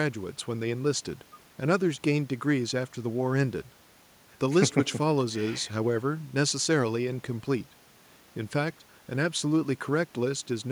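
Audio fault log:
No audible faults found.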